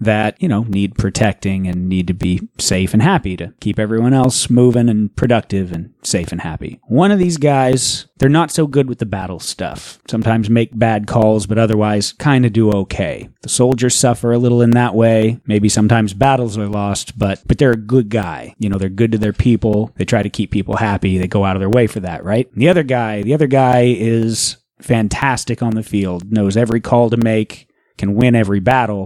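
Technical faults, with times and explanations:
0.23–28.72 s, periodic USB or driver dropouts: regular ticks every 0.5 s, audible only while speech is present, as a few milliseconds of signal drop to silence each time, because a background task stalls the USB bus or audio driver at a fixed interval.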